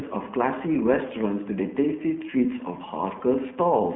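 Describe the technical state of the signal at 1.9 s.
At 1.9 s the speech carries iLBC codec damage, present throughout. Each 20 ms frame is coded on its own, so it sounds rough and synthetic. Nothing passes above 3.6 kHz, and the codec runs in its 15.2 kbps mode.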